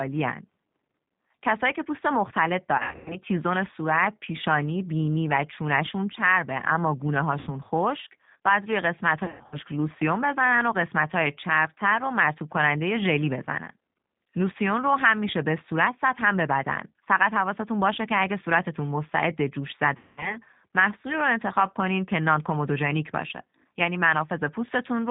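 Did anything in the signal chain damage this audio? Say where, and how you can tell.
Yes. The codec stage is the first culprit: the whole clip carries plainly audible G.729 coding at 8 kbit/s. The speech has a slightly rough, synthetic edge because the decoder rebuilds each 10 ms frame from a vocal tract filter, a pitch predictor and a handful of pulses rather than the real waveform. Nothing above 4 kHz survives, so sibilants and brightness are gone. The faint room noise, about 55 dB below the speech, is part of the recording.

The second fault is network-stage VoIP packet loss concealed by the speech codec, at four points: 2.78 to 3.2 s, 7.39 to 7.51 s, 9.24 to 9.58 s and 19.97 to 20.38 s. At each one the speech smears into a buzzy, stretched tone or a coloured noise that fades rather than cutting to silence. The decoder is extrapolating from its last pitch and filter state and lowering the gain frame by frame. 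The first and third events are scattered gaps with runs up to 100 ms. The fourth is about 200 ms lost, and its gap lengths fit 20 ms packets.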